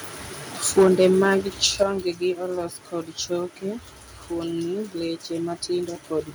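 From 0.77 to 1.33 s, microphone overload adds a harsh crackle as peaks exceed the converter's limit by about 6 dB, a few percent of samples cut flat, likely from excessive input gain. At 0.83 s, the microphone volume is stepped down by about 3 dB, likely by call software reacting to the distortion; unlike clipping, this is a clean, sudden level drop that also lowers the background. A second brief overload at 1.81 to 1.83 s, about 1 dB over, likely from the same cause, is followed at 1.83 s by a larger step down of about 7 dB, likely the software again, just before "olos kod choke".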